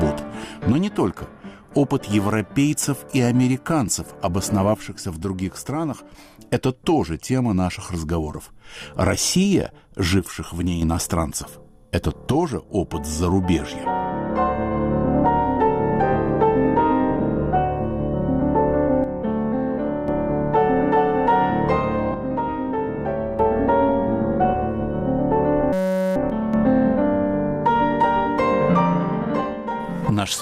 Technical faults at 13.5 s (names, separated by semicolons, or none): none